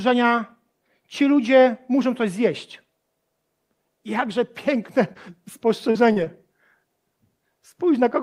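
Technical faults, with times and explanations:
5.13–5.17 s, 5.91–5.97 s, 6.13–6.18 s and 6.24–6.28 s: short concealed packet loss. In each gap, 20 to 40 ms of the speech arrived too late for the decoder, and the receiver filled 17 to 36 ms of it by extending the preceding sound: pitch-continued for voiced parts, shaped noise for unvoiced ones. It then crossfaded back into the real audio. Each gap is heard as a brief smear or wobble.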